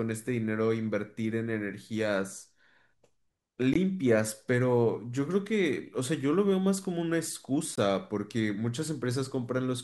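The audio was delivered in chunks about 4 seconds long, and a gap between chunks appears wherever one block ends and the next begins. Each gap inserts a stretch of silence without losing any sound, so the speech simply stops and then resumes. It happens at 3.74 to 3.76 s and again at 7.76 to 7.78 s, each a 20 ms hole, spaced about one chunk apart.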